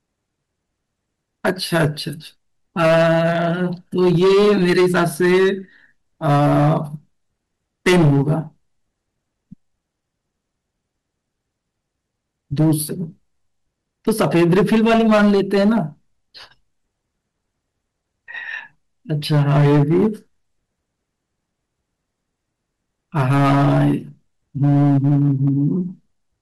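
The speech is driven about 13 dB past the limit of a converter or gain stage throughout, so hard clipping flattens roughly 7 percent of samples into harsh fuzz on loud syllables.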